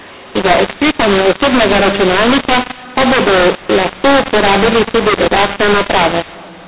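Throughout, mu-law and A-law are mixed up: mu-law telephone samples decoded as A-law scramble levels, unlike clipping, leaving harsh distortion and noise filling pauses.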